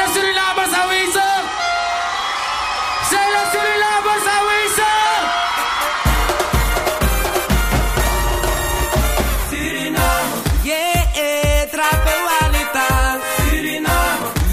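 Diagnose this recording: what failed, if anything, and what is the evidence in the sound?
Nothing in the recording points to a failure at any stage, so there's no fault to diagnose here.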